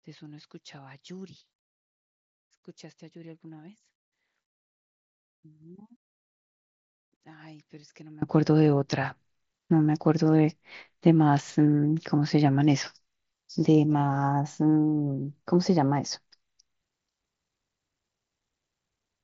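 From 0 to 8.22 s the speech drops by about 25 dB to a faint trace. The likely cause is one channel inverted: reversed polarity cancels the centred voice when summed to mono. The waveform shrinks to a thin sliver, and the spectrogram dims under the mSBC headset codec's ceiling near 7.7 kHz.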